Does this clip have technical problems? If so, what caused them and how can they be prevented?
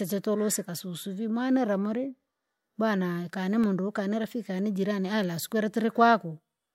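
Yes. Three CD scratch ticks fall between 3.38 and 3.89 s. A blemish on the disc wiped out more data than error correction could rebuild on each revolution, so the player concealed the damaged samples, leaving brief clicks, each under a millisecond. Cleaning or resurfacing the disc before ripping, and using secure-mode extraction with re-reads, prevents this.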